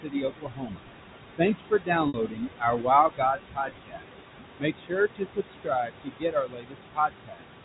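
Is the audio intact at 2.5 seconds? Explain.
No. At 2.5 seconds the audio sits inside a stretch of speech cut by the noise suppressor, running from 1.38 to 2.89 s. The suppressor mistook parts of the speech for background noise and turned them down with it. The level drops by up to about 20 dB, for roughly 0.7 s in total. Those parts sound swallowed. Noise suppressor artifacts are also present throughout the clip. The suppressor treats steady room noise as unwanted and lowers it by about 21 dB. So the background sinks in pauses and returns under the speech.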